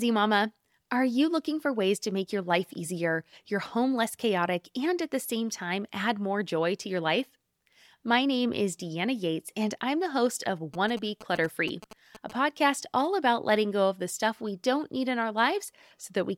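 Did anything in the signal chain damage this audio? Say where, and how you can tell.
Yes. From 10.74 to 12.32 s, between "I'm the host of" and "podcast all about letting", GSM signalling bursts break into the analogue wiring: a galloping dit-dit-dit of short buzzes at 217 Hz, roughly 15 dB below the speech. A nearby 2G phone's radio pulses are rectified by the audio circuitry. Mains hum is steady at 50 or 60 Hz. These come in gated clusters, and their buzz sits at the 217 Hz frame rate.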